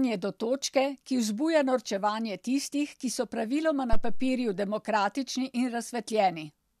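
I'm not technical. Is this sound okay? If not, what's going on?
No. A phantom power thump hits at 3.93 seconds and dies away by 4.41 seconds: a deep, dull bump in this speech. Power feeding the microphone was switched on or off while it was live, and that sudden jolt reached the recording, fading in about a tenth of a second.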